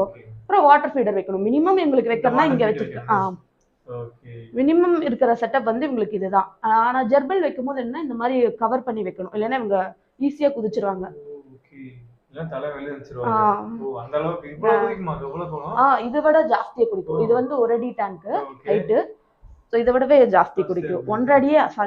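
Nothing goes wrong anywhere in this one, so there's really nothing to walk through here.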